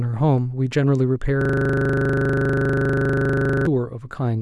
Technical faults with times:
1.41-3.66 system hang loop

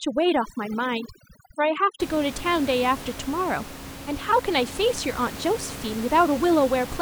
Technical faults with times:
0.00-2.00 overdone noise removal

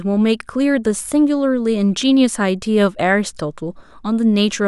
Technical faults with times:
none

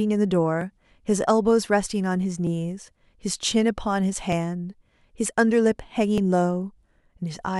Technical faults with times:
0.61-6.18 clock drift buffer slips

